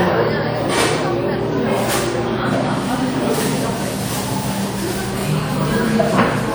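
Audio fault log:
Throughout, WMA compression: plainly audible ringing and washy smearing with a hiss that breathes along with the sound, likely from a low bitrate around 48 kbps.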